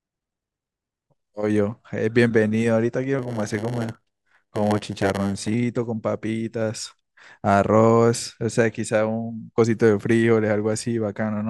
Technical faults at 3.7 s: block size mismatch (padded)

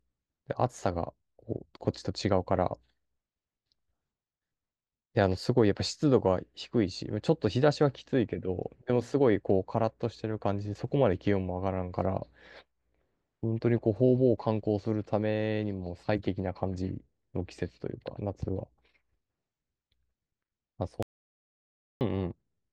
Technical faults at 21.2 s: audio dropout to silence

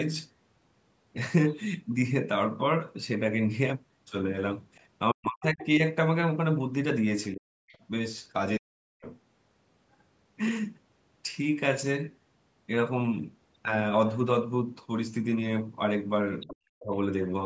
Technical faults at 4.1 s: none

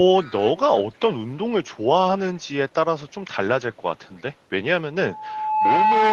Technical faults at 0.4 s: echo leak

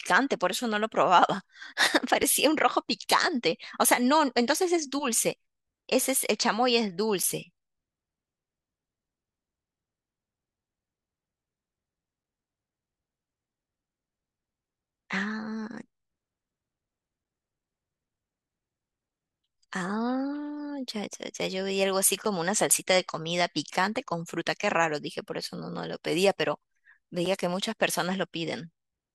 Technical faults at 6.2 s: none

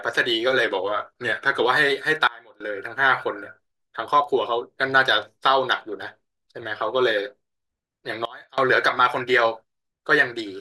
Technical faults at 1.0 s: drift correction step

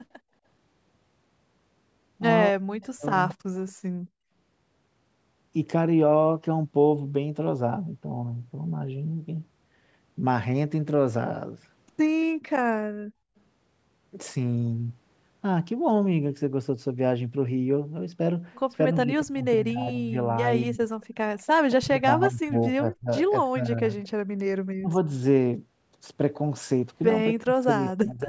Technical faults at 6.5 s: none

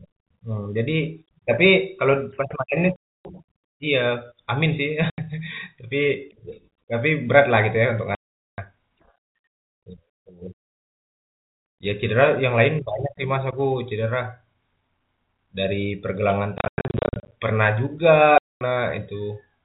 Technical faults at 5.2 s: packet loss filled with silence

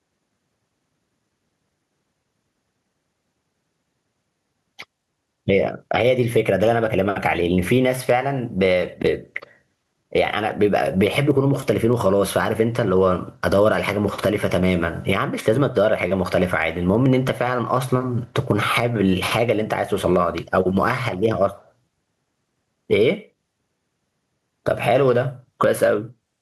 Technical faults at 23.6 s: gain pumping

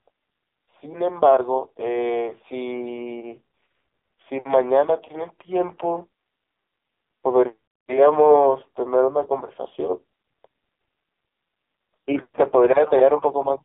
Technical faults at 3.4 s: AMR narrowband mobile codec

